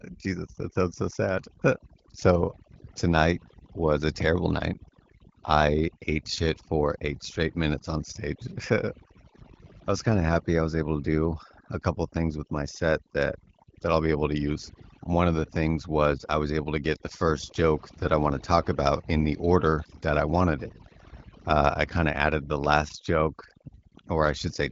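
Overdone noise removal runs through the whole speech recording: the suppressor, set far too aggressively, cuts individual frequency bands down or off whenever they approach its noise estimate, so the background drops and breaks up into twinkling specks. Unlike the light coding damage from the wideband telephone path, whose band stops near 7.3 kHz, these artefacts flicker and chirp with the level of each band.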